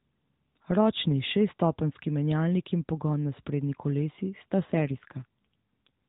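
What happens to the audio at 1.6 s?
Nothing goes wrong at 1.6 s: the speech carries straight through that moment intact, with only the narrowband mobile-phone character of the AMR-NB path that runs through the whole clip.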